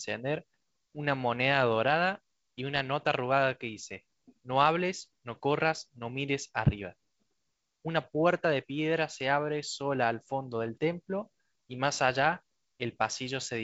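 No technical faults are audible.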